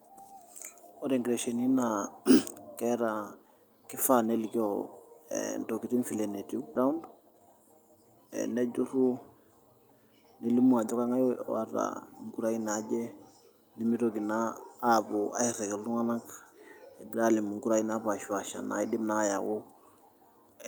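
At about 6.75 s there's a skip ahead: roughly a second of speech never gets played, and the two sides butt together with no gap filled in, so the talk just lurches forward. That stretch was dropped either on the way or by the jitter buffer when it overflowed.

Right after, from 6.85 to 8.53 s, you get a jitter buffer speed-up running at about 116% speed. The receiver is trimming tiny pitch-period slices over and over, around 300 ms in total, so the speech sounds rushed while the pitch stays put.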